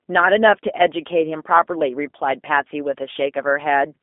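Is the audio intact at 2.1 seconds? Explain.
No, 2.1 s sits inside G.729 codec damage that runs the whole clip. The speech is rebuilt from a vocal tract model and a few pulses per frame, which fits an 8 kbit/s stream, so it sounds rough and slightly synthetic, squeezed into 250 Hz to 3.5 kHz with nothing above 3.6 kHz.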